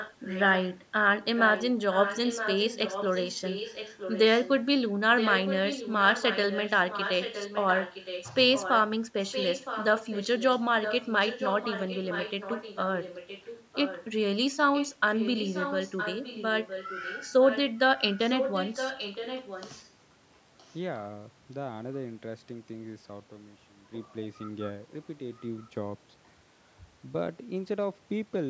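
A delayed copy of the speech trails the talker by just under a second, at about 0.97 s, through 0.00–0.79, 1.24–4.49, 5.17–8.80, 9.26–14.06 and 14.73–19.90 s, sitting roughly 10 dB under the main speech. A last faint scrap shows up at 20.58–20.75 s, far quieter. That's an echo leak, most likely a loudspeaker on the far end whose echo canceller let its mic pickup slip back into the call, heard within the band that tops out at 8 kHz.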